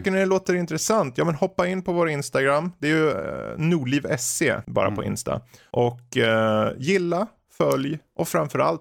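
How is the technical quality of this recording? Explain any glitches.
The speech carries a steady tick pattern from start to end. It's a resampler restarted on every block: each 50 ms chunk going from 48 kHz to 44.1 kHz loses its neighbours at the edges, so you get ticks at 20 Hz whenever signal is present.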